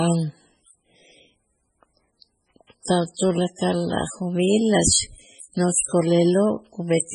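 Throughout the speech, nothing is heard above 10.4 kHz. Heavy swirling, watery artefacts run through it, and s sounds chirp metallically. This is likely MP3 compression, starved of bits so that weak frequency lines drop in and out. The damage fits roughly 16 kbps.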